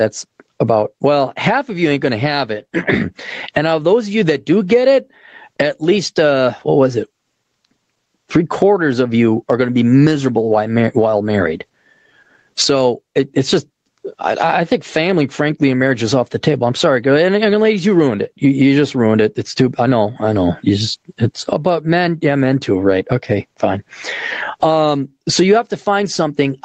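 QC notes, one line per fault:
Throughout, gain pumping: the level swings by roughly 25 dB as it is pulled down under each loud stretch of speech, so the sound feels squashed. Likely cause is input gain set far too high, with a fast limiter clamping down on each peak. On the waveform, loud and soft parts sit closer in level. Nothing reaches above 8 kHz, which fits Opus at 20 kbps limited to an 8 kHz band.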